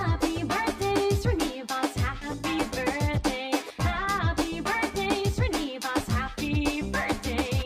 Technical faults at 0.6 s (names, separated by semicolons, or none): channel delay (comb filtering)